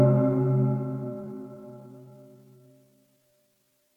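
From 1.0 s to the end, the audio turns into a time-stretched section: the pace suddenly drops to about 0.74 times normal speed while the pitch stays where it was. That steady pitch is what separates it from a plain playback-speed drop, which would sag lower as it slowed. The likely cause is software lengthening the passage by repeating short pieces of it.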